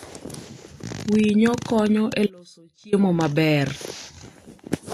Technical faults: Vorbis compression; audio dropout to a faint residue

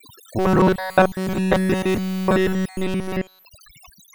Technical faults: overdone noise removal; robotic sound from repeated short buffers

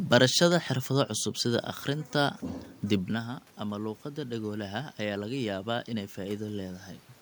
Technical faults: automatic gain rising

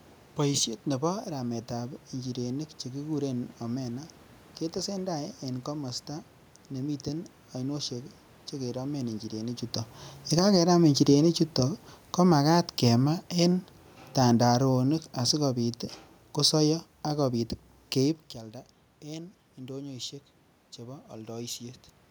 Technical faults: automatic gain falling

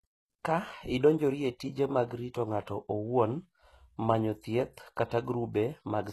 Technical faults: HE-AAC compression

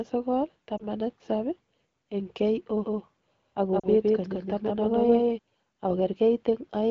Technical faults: lost AMR speech frames; doubled audio track

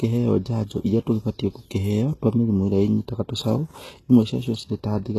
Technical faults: HE-AAC compression

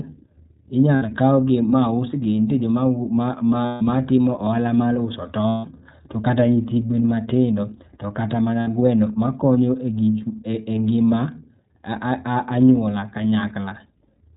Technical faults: iLBC codec; lost iLBC frames

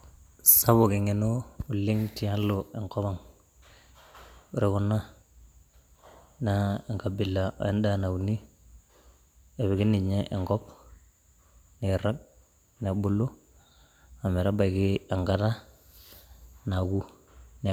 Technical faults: none

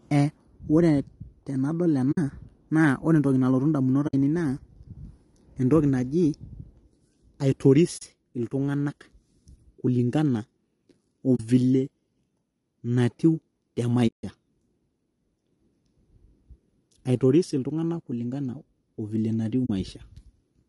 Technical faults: low-delay AAC compression; AAC frame loss with muting

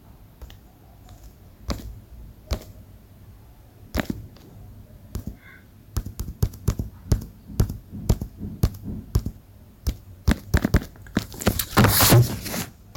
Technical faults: hard clipping

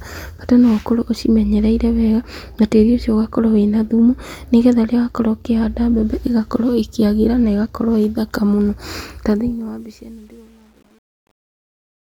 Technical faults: truncation distortion on a fade

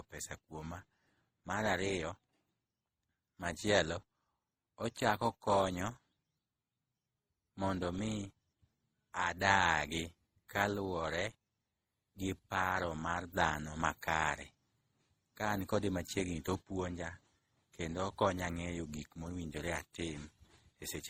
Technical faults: transcoding between lossy codecs

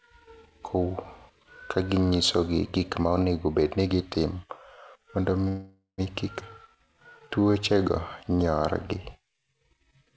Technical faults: call audio freeze; skip ahead; jitter buffer slow-down

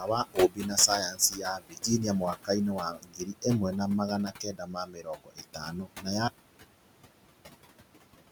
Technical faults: noise suppressor artifacts; speech cut by the noise suppressor; audio dropout to silence

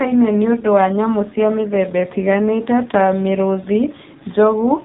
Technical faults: AMR narrowband mobile codec

